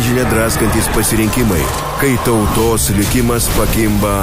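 Nothing faulty turns up at any point in the audio. There is no moment to flag and no event to time.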